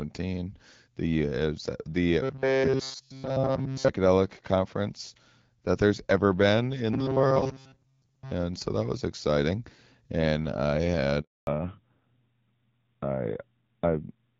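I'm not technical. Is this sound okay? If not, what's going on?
No. Robotic sound from repeated short buffers is heard at 2.23 to 3.89 s, just before "conference that there's ever", and again at 6.93 to 8.31 s, between "that there's ever been" and "so that was exciting". The voice becomes a rigid, metallic buzz at 133 Hz, likely because audio arrived too slowly and a tiny slice of about 7.5 ms was replayed over and over. That covers the whole first stretch and most of the second.

A handover gap follows at 11.21 s: the call switched networks and the voice drops out completely for 260 ms.

Fallback to narrowband starts right after, at 11.47 s, and lasts to the end. Everything above 4 kHz is gone, so the voice sounds duller and more muffled.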